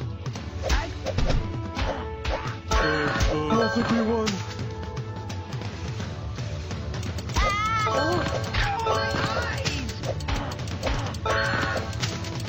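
A stream segment skipped is the likely cause at 8.50 to 8.56 s: one chunk of the segmented stream failed to load and playback moved straight on to the next. The audio jumps abruptly forward there, with a brief blip at the join and a stretch of the programme missing.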